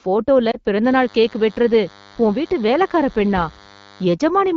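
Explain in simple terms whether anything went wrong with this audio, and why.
Two things went wrong. First, lost AMR speech frames: between 0.51 and 0.58 seconds the speech briefly dips and warbles. Radio errors corrupted a piece of the call, so the decoder filled the gap by repeating its last good sound settings at falling volume, consistent with one missing 20 ms frame.

Second, DECT cordless phone buzz: from 0.84 to 4.05 seconds a faint, thin, steady buzz sits under the speech. A nearby cordless phone or its base sends a radio pulse 100 times a second, and the audio circuitry picks this up as a 100 Hz tone with many overtones.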